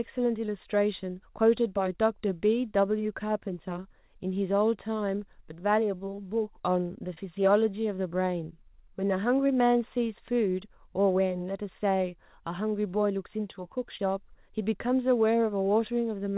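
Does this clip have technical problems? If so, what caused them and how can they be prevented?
Yes. Brief smears or wobbles at 0.46–0.50, 6.16–6.20, 7.14–7.25, 9.47–9.51 and 13.97–14.01 s are short concealed packet loss. About 20 ms of audio arrived too late each time, so the receiver extended the preceding sound to fill the gap before rejoining the real signal. At 7.14 s a further 10 ms was also dropped. The narrow, telephone-like sound with nothing above 4 kHz comes from the call codec, which fits G.711, and is not a fault. To prevent these dropouts, use a stable, uncongested network connection, preferably wired, and give the jitter buffer enough room to absorb late packets.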